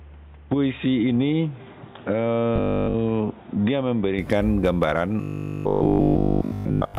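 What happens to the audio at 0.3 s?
The recording's input had likely been moved to a poorer device, and at 0.3 s the clip is inside that stretch, which runs from 0.0 to 4.19 s. The substitute input passes a narrower band, so the sound is dull and boxy, sits roughly 5 dB quieter, and carries its own background noise about 30 dB below the signal. At 4.19 s it switches back with no silent gap, and the fuller tone returns at once.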